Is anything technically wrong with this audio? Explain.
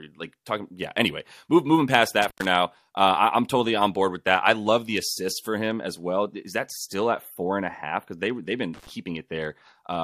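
Yes, there's an intermittent contact at 2.22–2.48 s and 8.74–8.90 s. A loose plug opens for about 105 ms and 85 ms, dropping the speech to faint hiss with crackle either side.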